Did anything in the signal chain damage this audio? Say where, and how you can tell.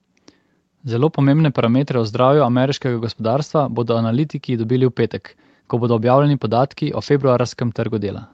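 No, the signal shows nothing damaged: its content stops at about 8 kHz, which is the normal bandwidth limit of the Opus call path, and the microphone processing's high-pass filter removes only the lowest bass, as expected.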